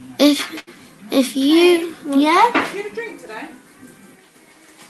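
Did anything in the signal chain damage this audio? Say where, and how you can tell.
Yes. A burst of packet loss at the network stage runs from about 0.59 to 0.69 s. For roughly 74 ms the receiver fills the gap by extending the last received sound and fading it down, so it smears into a held, decaying tail rather than going silent. When the audio resumes, about 80 ms of the original is gone, and the sound jumps forward. The Opus call path underneath it, audible as a top end rolling off near 12 kHz, did not cause this.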